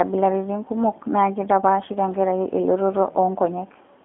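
G.729 codec damage runs through the whole clip, from start to finish. The speech is carried in a narrow band of roughly 200 Hz to 3.5 kHz, and everything above it is gone. Instead of storing the waveform, the codec rebuilds each short frame from a vocal tract filter, a pitch predictor and a few coded pulses, which fits the 8 kbit/s G.729A variant. The result is plainly audible: intelligible speech with a rough, buzzy, somewhat synthetic edge.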